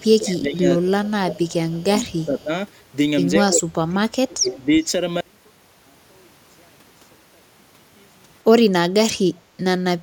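From the first instant, 0.00 to 0.04 s, there is an echo leak: a faint copy of the speech arriving 177 ms late, about 35 dB below the direct voice. This is likely a loudspeaker on the far side feeding its microphone, with its echo canceller failing to remove all of it. On a spectrogram it shows as a weak ghost of the speech's harmonic pattern shifted right by 177 ms. The same leak returns at 2.38 to 2.43 s, about 40 dB down, and most clearly at 4.48 to 4.66 s, only about 25 dB below the speech.

Speech suppressed in double talk runs through the first five seconds, at 0.08 to 0.65 s, 0.83 to 1.43 s, 1.72 to 2.50 s and 3.41 to 4.70 s. The voice dips by roughly 20 dB in the first stretch and around 25 dB in the others, for about half a second each time and about a second in the last. The likely cause is an echo canceller that could not separate its own talker from the returning loudspeaker signal during overlapping speech, so it pulled both down. 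The waveform shows sudden hollows in the envelope, and the spectrogram shows upper harmonics thinning or vanishing in patches.

From 5.21 s to the end, one channel is inverted, likely a polarity flip on one side of the stereo pair. When the channels are summed to mono, the centred voice nearly cancels and the level falls by about 35 dB. What remains is a faint residue. The waveform collapses to a low trace, and the spectrogram darkens.

At 9.42 to 9.57 s, the background is gated by the echo canceller. It clamped the microphone while the loudspeaker was active, so the room sound sinks by about 7 dB for 150 ms and then comes back. This appears as a brief notch in the noise floor.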